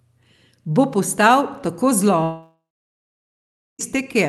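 Just after "postal tako", at 2.23 s, the audio smears into a fading buzz, then near-silence for about 1.2 s, resuming at 3.81 s with that stretch gone. A long network dropout is the likely cause: about 1.6 s never arrived, and concealment stretched the last sound.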